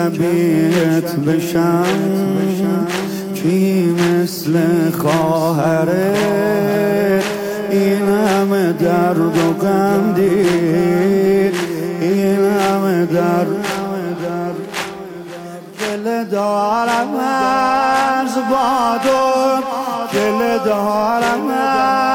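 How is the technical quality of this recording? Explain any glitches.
No glitches can be heard: the signal runs continuously with no dropouts, clicks, distortion or timing faults anywhere in the recording.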